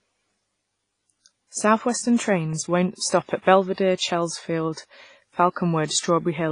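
Throughout the speech, heavy codec damage gives a ringing, washy quality with hiss that swells and fades with the signal, likely WMA compression at a low bitrate near 24 kbps. On a spectrogram nothing appears above 10.4 kHz, and weak detail shows as missing patches.

At 2.53 s a block of digital silence only 0.67 ms long briefly cuts the sound out with no fade. Being so short, it is heard as a tick rather than a gap. On a waveform it shows as a sudden notch, and on a spectrogram as a thin vertical broadband line.

Pre-echo appears from 2.96 to 3.01 s and again from 5.86 to 5.90 s. Here the codec spreads quantisation noise over its whole block, so noise meant for a sharp attack leaks into the quiet just before it. The leak lasts 52 ms in the first case and 45 ms in the second. Each attack is preceded by a short hiss and sounds smeared. On a spectrogram this shows as a faint noisy smudge leading into the onset, and on a waveform as low-level fuzz ahead of the attack.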